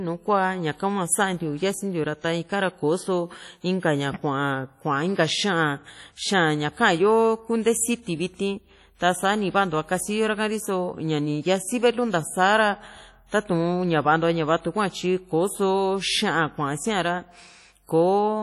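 WMA compression, throughout the speech: the sound rings and washes, with a hiss that swells and fades with the signal, and nothing above 18.1 kHz. The likely cause is a simple transform codec at a low bitrate, which fits about 32 kbps.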